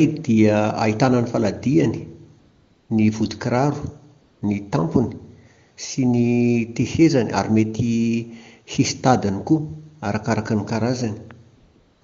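A smooth, steady hiss replaces the real background from 2.39 to 2.89 s, 4.21 to 4.41 s and 11.55 to 12.01 s. This is AMR comfort noise: the phone judged these gaps silent, stopped sending speech frames, and the receiver synthesised filler noise.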